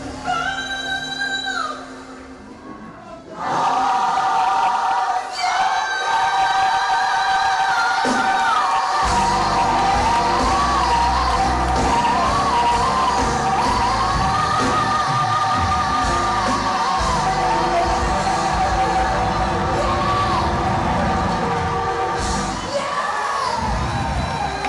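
No technical faults can be heard anywhere in this audio.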